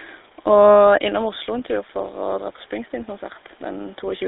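GSM full-rate codec, throughout: a vocal-tract model driven by sparse regular pulses, squeezed into a 300 Hz to 3.7 kHz line, leaves the speech plainly buzzy and gravelly.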